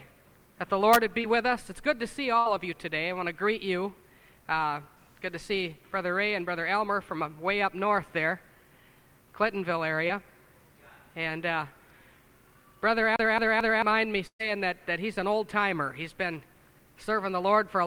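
Short concealed packet loss at 1.21 s and again at 10.08 s: each time about 20 ms of audio failed to reach the decoder in time, and the receiver filled the hole by extending the preceding sound for roughly 20 ms before blending back into the real signal. Both appear as a very brief smear or wobble.

A burst of packet loss at 2.40 to 2.48 s removes about 60 ms. The receiver carries the last sound forward and lets it sag in level, giving a short held buzz or hiss before playback picks up further along, with the lost stretch simply absent.

CD stuck on one turn from 13.16 to 13.82 s: the same 221 ms slice of audio plays three times in a row, each restart marked by a tiny mute where the pickup jumps back. This is the even, mechanical stutter of a scratched disc skipping on the same revolution.

A second burst of packet loss at 14.27 to 14.41 s is longer, with about 120 ms missing. The concealment stretches the last sound over that span and fades it away, leaving about 80 ms of near-silence before the audio resumes later than where it dropped.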